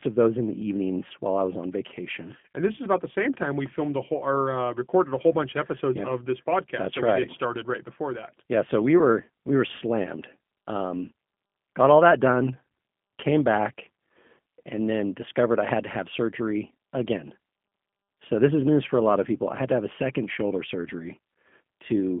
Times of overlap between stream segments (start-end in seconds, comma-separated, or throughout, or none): none